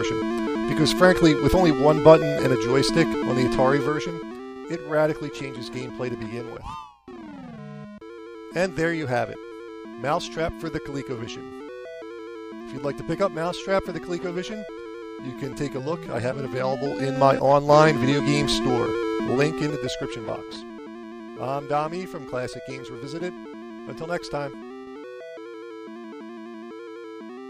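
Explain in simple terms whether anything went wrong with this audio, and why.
Zipper noise: the volume was changed in small, unsmoothed jumps, so each jump clicks, giving a zipping tick at 3.72–4.37 s, 16.25–17.74 s and 19.13–20.62 s.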